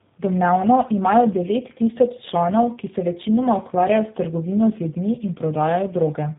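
Tandem speech coding runs throughout. The speech went through two low-rate speech coders in a row, which fits GSM then G.729A. It sounds rough, warbly and muffled, with nothing above 3.8 kHz.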